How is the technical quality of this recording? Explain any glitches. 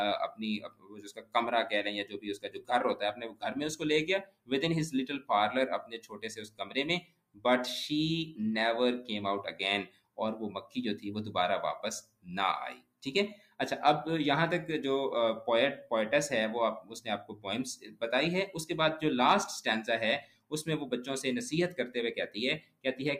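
The recording's main weakness is processing, not capture. A noise suppressor designed for speech was applied to this non-speech sound. It stays active throughout and misreads sustained tones and decays as noise, so the level pumps over a swing of around 15 dB. On a waveform the envelope breathes unevenly. On a spectrogram held energy flickers and thins while onsets stay bright.

The sound is cut by the noise suppressor at 0.29–8.39 s, 9.52–11.05 s, 12.01–13.59 s, 16.81–18.55 s, 20.21–20.53 s and 21.7–22.85 s. Steady or fading material there drops by about 20 dB, and by about 19 dB in the fourth span. Tails are chopped short, leaving dark gaps after bright attacks on the spectrogram.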